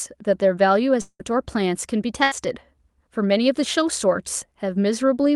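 From 1.01 to 1.21 s, a long network dropout likely stopped audio arriving: about 180 ms is lost, concealed as a fading buzz or hiss before about 60 ms of silence. At 2.23 to 2.33 s, a burst of packet loss drops about 80 ms, which the receiver fills with a decaying buzz or hiss before resuming further on.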